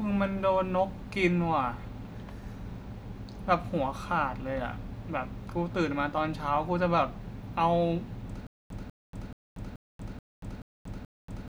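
Speech clip with a stutter with silent gaps from 8.47 s to the end: a 195 ms fragment repeats seven times, each followed by about 235 ms of digital silence, a 430 ms cycle. This is likely a stalled player or stream replaying its last buffer, with the intervening audio lost.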